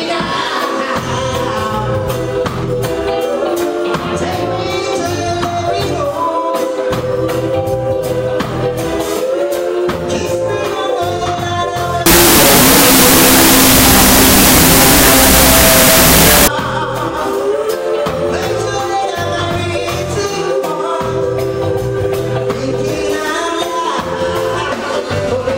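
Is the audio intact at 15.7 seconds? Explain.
No. From 12.06 to 16.48 s, loud noise buries the sound at half speed, an octave low: wrong sample width, 16-bit samples read as unsigned 8-bit.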